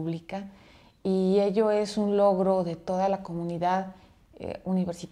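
Nothing is technically wrong with this clip, and no faults can be heard anywhere in the audio.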